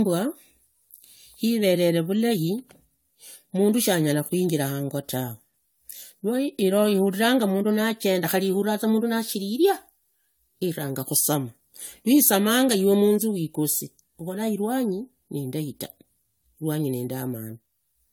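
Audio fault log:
throughout: generation loss. The speech has a swirly, watery smear and a hollow, holed-out tone, with consonant attacks blurred, yet the top end still reaches about 20 kHz. A single encode at this bandwidth, which fits roughly 96 kbit/s AAC-LC, would not sound this damaged. The cause is likely repeated decoding and re-encoding, around five passes, each quantising on a shifted frame grid so the noise and spectral gaps pile up rather than merely narrowing the band.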